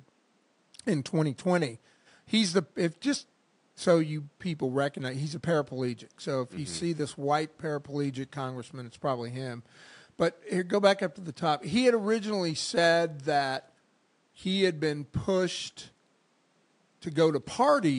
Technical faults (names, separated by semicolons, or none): none